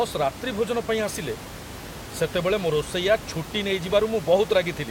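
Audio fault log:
No fault is heard in this speech clip.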